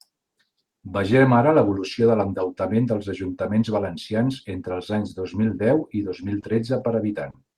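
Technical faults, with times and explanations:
5.49 to 7.10 s, lost packet rebuilt from error correction: brief rough, noisier patches with no gap, each lasting 20 ms, at 5.49, 6.22 (just after "mil deu i dos"), 6.42 and 6.52 (both after "deu i dos mil"), 6.80, 6.92 and 7.08 s. Each lost packet was replaced by the lower-quality backup copy carried in the following packet, so the audio keeps running but loses detail.
6.40 to 7.36 s, short concealed packet loss: a quick smear or wobble at 6.40 to 6.44 s, where 20 ms is filled, and a longer one at 7.30 to 7.36 s, where 40 ms is filled. No backup copy arrived, so the decoder stretched the preceding sound across the hole and then blended back into the real audio.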